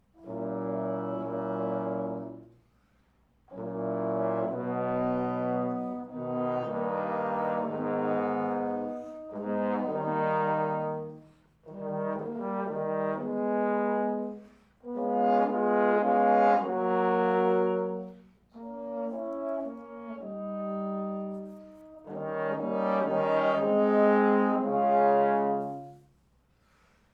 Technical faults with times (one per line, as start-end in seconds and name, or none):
none